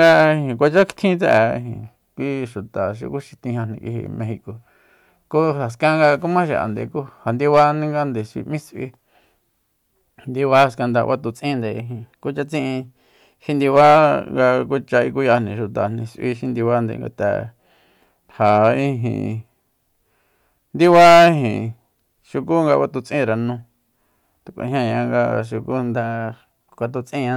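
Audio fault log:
11.34–13.75 s and 25.95–27.36 s, drift correction step: speech jumps 6.3% faster and 106 cents sharp, likely from clock-matching software stepping the playback rate to rebalance its buffer.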